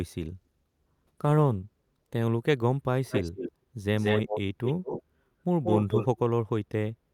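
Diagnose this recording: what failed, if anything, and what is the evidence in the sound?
A call bitrate drop cut the Opus encoder from 64 to 20 kbps between 0.42 and 2.23 s, so speech turns coarse and muffled with the highs gone.

An echo leak, likely from a loudspeaker the echo canceller missed, returns speech 181 ms late at 3.1–3.52, 3.97–4.41, 4.64–5.03 and 5.63–6.19 s, sometimes as loud as the original.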